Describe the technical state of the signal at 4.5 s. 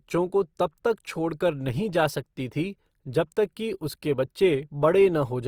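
Opus compression is audible at 4.5 s, as it is across the whole clip. The speech sounds rough and grainy rather than hollow or swirling, with a noisy texture where clean harmonic detail should be. The likely cause is Opus in its music (CELT) mode at a rate around 24 kbps. Starved of bits, it preserves each band's overall energy but fills the fine detail by copying lower bands or inserting noise. The bandwidth stays wide, reaching up to 20.4 kHz.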